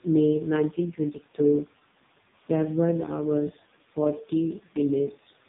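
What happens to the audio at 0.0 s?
From 0.0 s and for the whole clip, noise suppressor artifacts are present. The suppressor pulls down bands it treats as steady noise, frame by frame, by about 16 dB, so the room noise sinks in pauses and returns under the speech. A spectrogram would show the noise floor pumping between dark gaps and patchy specks.

The AMR narrowband mobile codec is also active from the start. It rebuilds the speech from a vocal-tract model driven by sparse pulses, and its heavy damage makes the speech buzzy and synthetic, which fits the lowest AMR-NB mode of around 4.75 kbps. On a spectrogram, nothing appears above 3.8 kHz, with smeared harmonics below that line.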